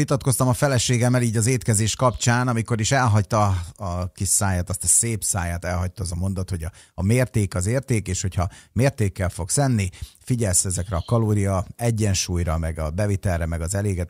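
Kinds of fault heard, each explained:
No technical faults can be heard in this recording.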